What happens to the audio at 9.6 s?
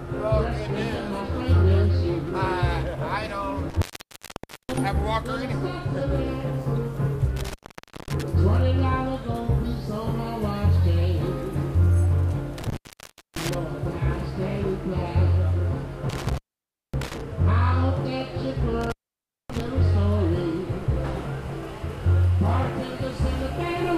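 Nothing goes wrong at 9.6 s; the audio plays through that moment cleanly, with no dropout, click or other audible fault.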